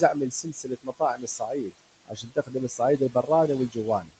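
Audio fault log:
throughout: noise suppressor artifacts. The suppressor pulls steady room noise down by about 21 dB frame by frame, so the background pumps between phrases.
0.00–1.79 s, 2.06–2.80 s, 2.98–3.29 s, 4.00–4.14 s: speech cut by the noise suppressor. Parts of the speech were taken for noise and dropped by up to about 21 dB, so endings and soft consonants sound swallowed.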